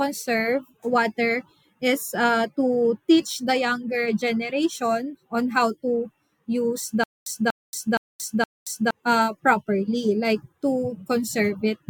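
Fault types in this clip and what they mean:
stutter with silent gaps: from 7.04 to 8.91 s a 240 ms fragment of the speech plays four times, each followed by 227 ms of digital silence, repeating every 467 ms. This is likely a stalled stream replaying its last buffer, so the intended audio is lost.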